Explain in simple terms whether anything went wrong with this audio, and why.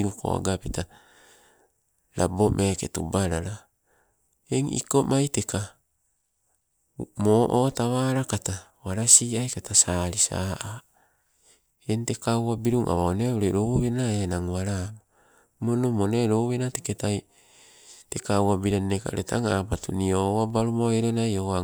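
Nothing went wrong here; no faults can be heard.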